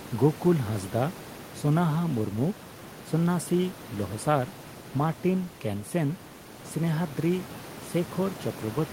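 No technical faults are audible.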